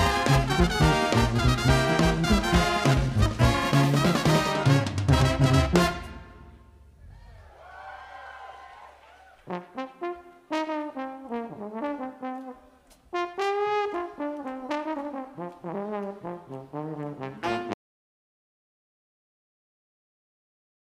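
The audio has an audio dropout to silence starting at 17.74 s. The sound cuts off mid-flow and never returns before the end. What follows is silence, with no room tone. The input was likely lost while the recorder kept writing silence.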